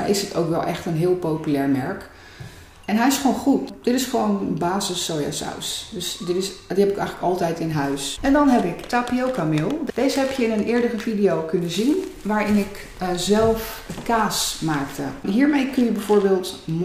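No technical faults can be heard anywhere in the audio.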